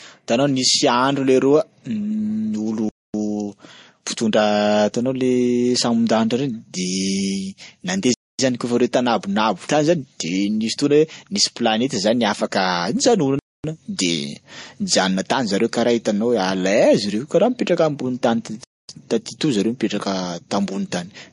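Throughout, the speech has nothing above 10.5 kHz and mixed smearing and swirly artefacts, likely transcoding between lossy codecs, consistent with low-bitrate MP3 re-encoded to Vorbis. Gaps between chunks cut hard 250 ms silences at 2.89, 8.14, 13.39 and 18.64 s, after every 5 s of audio, interrupting the speech without losing any.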